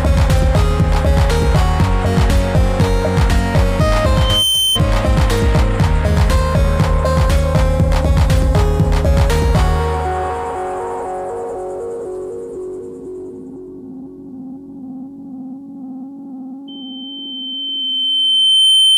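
Loudspeaker feedback squeal, a 3.1 kHz tone from the mic catching its own speaker, swells quickly at 4.16–4.80 s, then builds slowly and louder from 16.68 s to the end.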